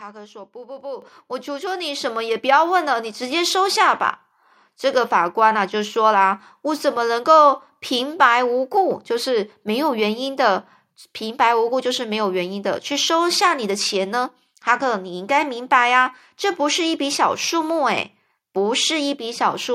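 At 1.02 s the microphone volume gets stepped up, and the whole level jumps by about 9 dB in one go. Then at 2.04 s it happens again, another jump of about 5 dB. What's going on is the call software deciding the mic is too quiet and bumping the device's input volume. Because it's the input gain moving, the voice and the background noise get louder together, so you hear two abrupt level steps.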